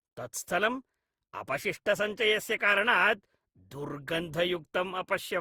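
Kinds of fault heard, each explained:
generation loss: The speech sounds swirly, hollow and smeared, with blurred consonant attacks, worse than one pass at what sounds like about 64 kbit/s would give. The likely cause is around ten rounds of Opus decoding and re-encoding, each quantising on a shifted frame grid so damage accumulates.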